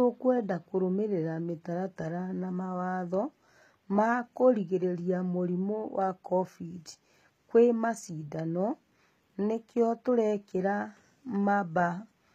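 Throughout, the s sounds turn gritty and metallic, likely from HE-AAC compression near 20 kbps: replicated treble sits in smeared, mismatched bands on a spectrogram, ending sharply at 14.9 kHz.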